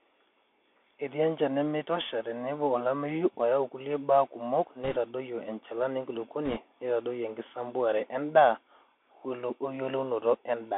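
Throughout, the speech carries the Bluetooth CVSD headset codec. Each sample is coded only as a step up or down, so the step size can't keep pace with loud, bright sounds. Sibilants turn scratchy and a granular hiss sits underneath. On a spectrogram, energy stops sharply above 3.4 kHz and thins below 250 Hz. The staircase texture fits a 64 kbps one-bit stream.

From 4.84 to 4.97 s, and again from 6.45 to 6.60 s, bit errors on a Bluetooth voice link add a brief rushing crackle. The error rate is a few percent. Each flipped bit moves the signal by one step, whose size follows the speech level, so the waveform shows a fuzzy, noisy patch rather than sharp spikes. The spectrogram shows broadband speckle, still limited to the narrow band.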